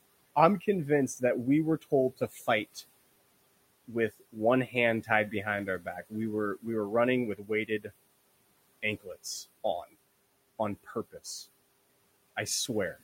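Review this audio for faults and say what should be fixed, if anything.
Speech cut by the noise suppressor at 1.81–2.83, 4.67–5.33, 5.80–6.13, 7.35–7.91 and 10.84–11.25 s: quiet speech was treated as noise and pulled down by about 11 to 19 dB. Lowering the suppressor's attenuation depth or its threshold would prevent it, especially since the room noise already sits about 22 dB below the speech.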